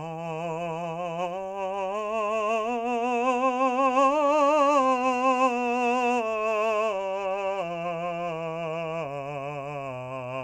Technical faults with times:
none

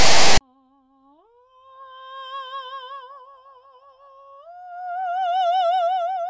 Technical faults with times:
0.00-0.41 file tags played as audio

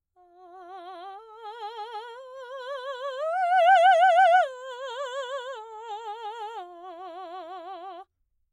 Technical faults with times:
none

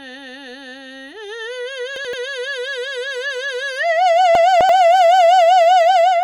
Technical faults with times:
1.96-2.13 chunks out of order
4.35-4.69 chunks out of order

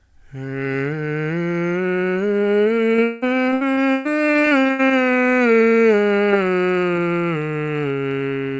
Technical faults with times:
2.96-4.92 repeated packet loss (robotic sound)

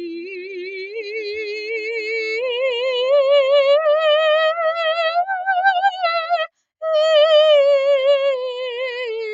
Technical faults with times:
0.00-9.33 noise suppressor applied to music or sounds
5.14-6.10 sound cut by the noise suppressor

